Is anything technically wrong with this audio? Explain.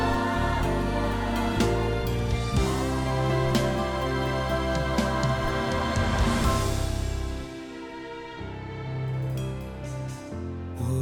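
No, the signal holds steady throughout, with no technical fault to be heard at any point.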